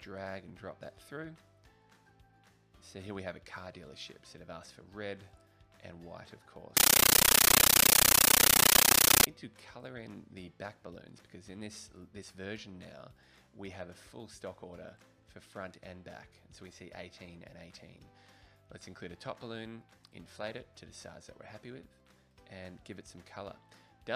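Compressed stream played as audio, 6.77 to 9.27 s: undecoded Dolby Digital data becomes loud static, 13.3 ms bursts repeating 31.25 times a second.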